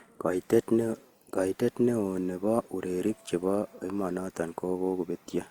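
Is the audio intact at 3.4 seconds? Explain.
No, 3.4 s sits within generation loss running throughout: swirly, hollow, smeared speech with blurred attacks, likely from roughly five re-encodings through a codec like Opus, worse than one pass would give.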